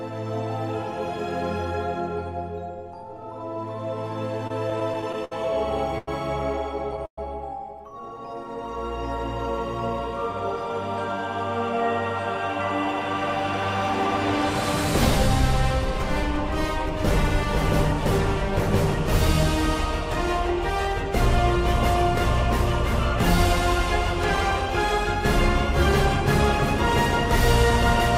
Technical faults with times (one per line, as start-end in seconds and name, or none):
4.38-7.18 repeated stalls (stutter)
8.14-8.70 jitter buffer slow-down
19.85-26.60 jitter buffer speed-up